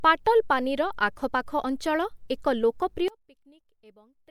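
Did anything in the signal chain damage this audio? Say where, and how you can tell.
Yes. There is a one-channel-inverted fault from 3.08 s to the end of the clip at 4.30 s, right after "ଅଞ୍ଚଳ ଏକ". The level drops by about 28 dB there, leaving only a residue of the speech. The likely cause is a polarity reversal on one leg of a stereo path, such as swapped wiring or a flipped channel. When the two channels were folded to mono, the shared content cancelled and only their difference survived.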